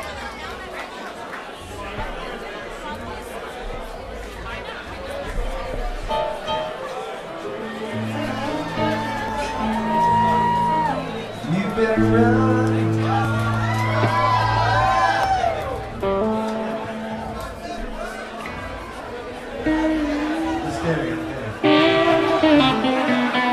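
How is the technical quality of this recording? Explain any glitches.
The recording has one recurring fault: overlap between stream segments, heard as tiny skips at 5.30 s (lasting to 5.32 s), 9.28 s, 11.27 s, 13.25 s and 15.24 s. The stream arrives in 2-second segments whose timestamps overlap slightly. The player trims the overlap, discarding 5 to 20 ms of audio that was never duplicated. At each splice the waveform jumps, producing a small click or skip that falls on the roughly 2-second segment grid.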